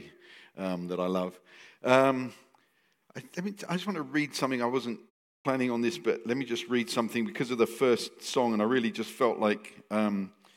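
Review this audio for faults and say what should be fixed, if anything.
Clipped start after a pause at 5.41 to 5.45 s: after a silence of about 0.39 s, the output path appears to drop into an idle state and needs time to wake and resynchronise. About 39 ms of the next sound is lost while it recovers, so the onset comes in abruptly with its opening sounds missing. To prevent the clipped start, keep the output stream active through silences, for example by feeding it a continuous low-level signal, rather than letting the device sleep.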